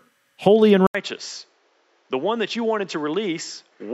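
At 0.87 s, just after "holy and", the speech drops out for 80 ms and then returns through what is likely an input switched to a poorer device. The change lasts to the end of the clip. Nothing is left above 7.5 kHz, so the speech turns dull and boxy. The level falls by roughly 10 dB. A new noise floor appears, sitting roughly 40 dB below the speech. The change happens at once, not as a fade.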